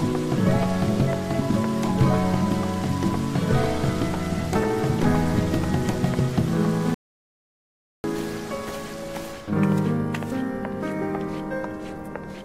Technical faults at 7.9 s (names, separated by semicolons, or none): audio dropout to silence